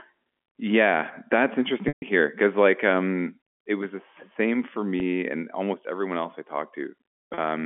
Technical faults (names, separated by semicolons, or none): packet loss with pitch repetition